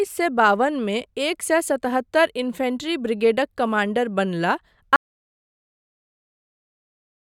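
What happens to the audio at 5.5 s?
At 5.5 s the clip is inside an audio dropout to silence that begins at 4.96 s and runs to the end. The speech cuts off mid-flow into silence with no room tone, most likely because the input was lost while the recorder kept writing silence.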